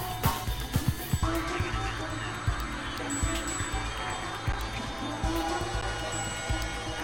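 The output buffer ran dry twice in this music, at 4.52 s and again at 5.81 s. Each is an underrun with held sample: the converter froze on its last value for about 10.7 ms, which fits a 512-sample buffer, until data arrived again. The waveform goes flat and the music briefly stops with little or no click. Since no audio was lost, playback picks up where it left off and each gap closes softly.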